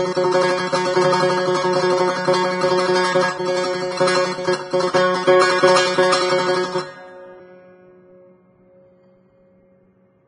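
From start to finish the music is band-limited, with nothing above about 9.7 kHz, and the treble that remains is hissy and grainy, with roughened tones and softened attacks. This is likely Vorbis compression at heavy damage, consistent with a very low bitrate near 20 kbps. The codec smooths the spectral floor and quantises the upper residue so coarsely that detail turns into noise-like grit. A plain low-pass filter would leave the remaining treble clean rather than grainy.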